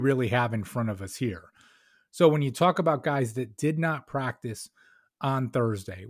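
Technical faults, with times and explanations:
No technical faults can be heard anywhere in this speech recording.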